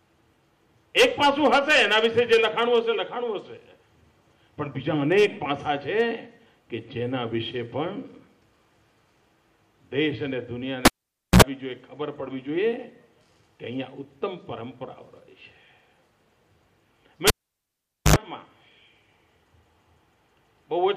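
At 10.85 s a cable is pulled and plugged in: a pop, then about 0.52 s of near silence while the connection is open, then a 65 ms burst of 60 Hz mains buzz as only the tip touches, and a second pop when the signal returns at 11.42 s. The same fault recurs from 17.27 s to 18.16 s, with a longer 0.84 s dropout and a 78 ms buzz at 50 Hz.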